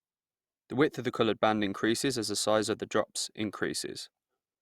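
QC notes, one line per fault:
No faults found in this speech clip. Nothing here calls for a QC note.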